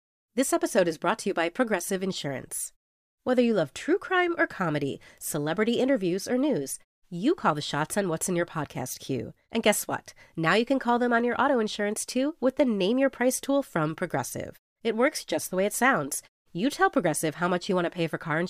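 No technical faults are present.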